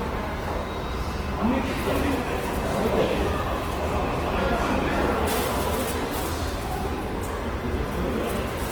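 A clip of sounds with plainly audible compression damage from start to finish. Tones come out noisy, rough and grainy, and band energy is kept but filled in coarsely. Content reaches up to about 20.2 kHz. Likely cause: Opus compression in its music mode, at a rate that fits roughly 16 kbps.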